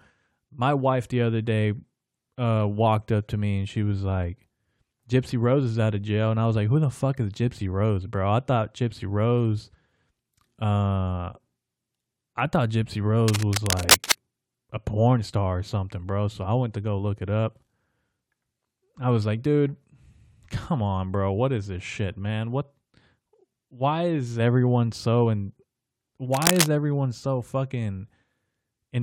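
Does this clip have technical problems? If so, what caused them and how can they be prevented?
Yes. Cable scratch noise rustles over the speech from 13.2 to 14.1 s and from 26.33 to 26.67 s, about as loud as the speech. A worn cable or connector being moved is the likely cause. Secure and replace worn leads and plugs before recording.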